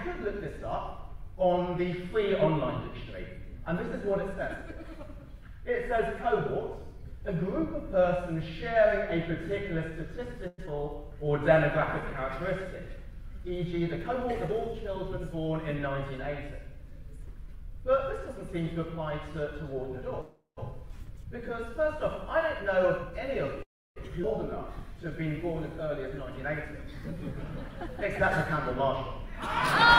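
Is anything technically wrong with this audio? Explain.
Yes, the audio has timing faults typical of a packet-based call path: three call audio freezes, two skip-aheads, two jitter buffer slow-downs and two jitter buffer speed-ups.

Call audio freezes occur at 10.47 to 10.60 s, 20.21 to 20.59 s and 23.62 to 23.98 s. Packets were likely held up and the buffer ran dry, so the receiver stretched the last sound into a fading fill of 107, 361 and 335 ms. That fill ends in silence of 20, 150 and 300 ms. Nothing is lost. On a spectrogram the fill appears as a smeared band that decays to a blank column, and the waveform tapers to flat.

Skip-aheads occur at 10.66 to 10.69 s, with about 70 ms missing, and at 24.22 to 24.25 s, with about 300 ms missing. A stretch of audio was dropped while later audio was already waiting, so playback jumps forward across a splice of only 8 and 12 ms. The waveform shows an abrupt seam, and on the spectrogram the harmonic tracks change at that point without any transition.

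Jitter buffer slow-downs run from 11.11 to 12.17 s at 95% speed, adding 61 ms, and from 24.50 to 25.54 s at 91% speed, adding 99 ms. The buffer repeated single pitch periods to rebuild its reserve, so the sound drags while its pitch stays the same. In the waveform the repeated cycles look like stretched segments, and spectrogram features become longer horizontally.

Jitter buffer speed-ups run from 13.73 to 15.20 s at 108% and from 22.43 to 23.56 s at 109%. Each removes roughly 100 ms by cutting pitch periods to reduce a backlog, so the sound is hurried at the same pitch. Spectrogram events are horizontally compressed, and the waveform loses whole cycles.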